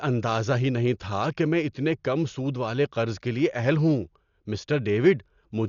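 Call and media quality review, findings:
Dull speech throughout, nothing above 7 kHz, rough flutter around tones. Likely Dolby Digital compression; fits a starved 48 kbps stream with dither-filled lines.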